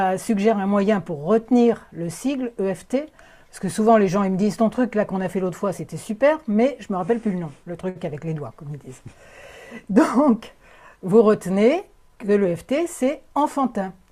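At 7.89 to 7.97 s there is a short stall from a late packet. The jitter buffer ran dry and the last sound was stretched for 60 ms before resuming where it left off. It is heard as a sound held too long, with a slight buzz or dip, and a spectrogram shows frozen, flat bands.

From 12.08 to 12.53 s comes a jitter buffer speed-up. Around 70 ms of pitch periods are cut to reach 113% speed, so the sound is hurried at unchanged pitch. The spectrogram looks time-squeezed, with the same harmonic spacing.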